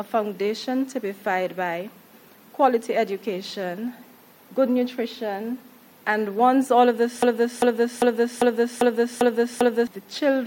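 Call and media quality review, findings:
Broken-record loop, 7.23–9.87 s: a 0.40 s fragment repeats seven times back to back, and the intended audio is lost. Likely a stalled player or stream resending its last buffer. Spectrogram shows identical blocks tiling at 0.40 s intervals.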